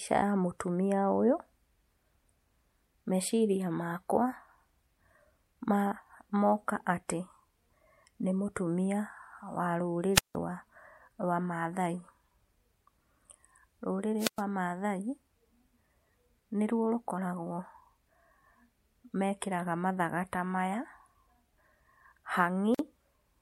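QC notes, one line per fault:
10.14–10.36 s and 14.18–14.42 s, wireless microphone squelch dropout: the radio link fades, hiss creeps up, then the receiver's squelch mutes the speech for 168 ms and 111 ms before it returns.
22.75–22.79 s, gap at a join of encoded pieces: a 47 ms hole with abrupt, slightly smeared edges, left by encoder delay and end-frame padding kept at the splice.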